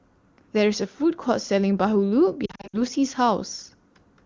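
From 2.45 to 2.82 s, lost AMR speech frames: scattered drops totalling 180 ms, runs up to 60 ms, were concealed with repeated, fading parameters, producing warbles and dips, seen as smeared harmonics and energy notches.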